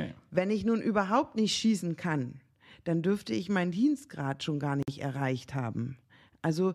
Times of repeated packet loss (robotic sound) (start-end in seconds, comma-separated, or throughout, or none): none